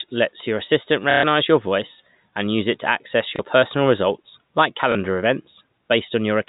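Packet loss with last packet repeated at 1.11–1.23 s, after "lets your assistant", then at 3.36 and 4.92 s. Repeated 30 ms chunks buzz briefly in the first run and blip at the later two, over the G.711 telephone band.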